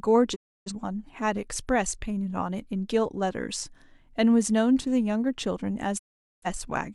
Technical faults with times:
0.34-0.71 digital broadcast dropout
5.97-6.47 digital broadcast dropout

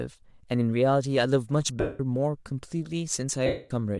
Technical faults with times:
0.00-4.00 Bluetooth LC3 compression
1.80-2.00 lost LE Audio frames
3.46-3.71 lost LE Audio frames

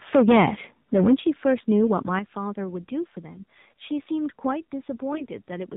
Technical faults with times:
0.00-5.76 AMR narrowband mobile codec
0.16 microphone volume stepped down
0.95-1.14 microphone overload
1.17 microphone volume stepped down
1.45-1.92 microphone overload
5.12-5.26 AMR bit errors

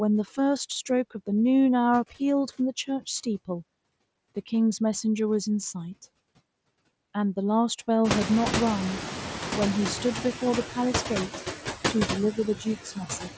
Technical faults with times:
0.00-13.37 noise suppressor artifacts
12.56-13.29 speech cut by the noise suppressor

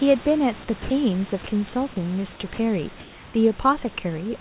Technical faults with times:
0.82-0.90 sound dropped by the voice detector
1.92-1.96 sound dropped by the voice detector
2.54-2.58 sound dropped by the voice detector

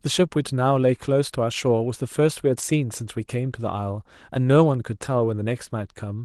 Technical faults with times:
none

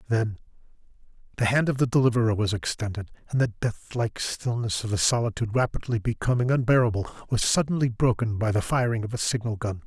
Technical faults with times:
none

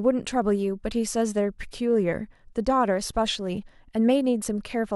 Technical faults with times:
0.42 overlap between stream segments
4.42 overlap between stream segments

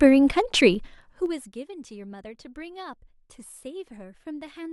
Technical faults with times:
0.68-1.62 zipper noise

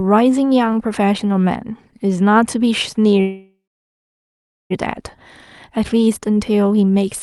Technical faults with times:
3.21-4.72 call audio freeze

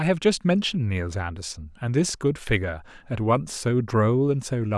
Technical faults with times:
none

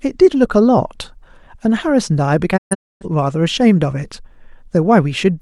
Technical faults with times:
2.56-3.06 digital broadcast dropout

